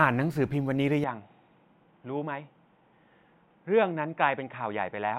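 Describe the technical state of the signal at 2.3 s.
At 2.3 s the speech is band-limited, with nothing above 3.8 kHz. It sounds dull and boxy, about 5 dB quieter, and carries a faint new noise floor well below the signal. This state runs from 1.04 s to the end of the clip, with no silence at the change. The likely cause is an input switched to a poorer device mid-recording, such as a headset call profile whose narrower bandwidth, lower level and own background noise replace the original microphone's.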